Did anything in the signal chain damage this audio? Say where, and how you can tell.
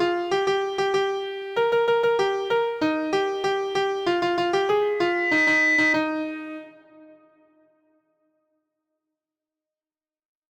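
Yes. Loudspeaker feedback squeal in the analogue acoustic loop from 4.82 s to 5.99 s: a steady 2 kHz tone swells over about half a second until it sits a few dB above the programme. The microphone was picking up its own loudspeaker, and loop gain exceeded unity at that frequency.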